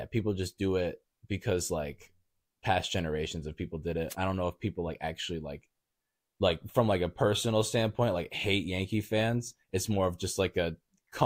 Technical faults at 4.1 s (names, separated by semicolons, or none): wireless microphone noise hit